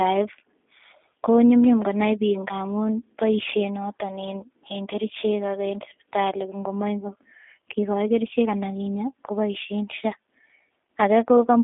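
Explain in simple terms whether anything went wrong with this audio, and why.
The speech passed through a G.729 codec, a low-bandwidth phone-call compressor that rebuilds speech from a simplified model rather than sending it whole. From start to finish the voice sounds thin and slightly rough and synthetic, with nothing above about 3.7 kHz.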